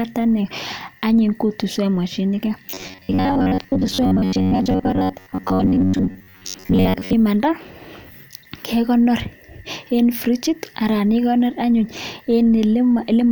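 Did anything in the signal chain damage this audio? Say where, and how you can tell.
Yes. Between 2.66 s and 7.13 s the audio path is likely being starved at the driver or buffer stage, so it loops tiny stretches of old audio instead of waiting for new samples. The result is robotic sound from repeated short buffers: the speech collapses into a rigid, metallic buzz fixed near 93.8 Hz, a repeat of roughly 11 ms, while the real signal is skipped for most of that span and the words only loosely show through.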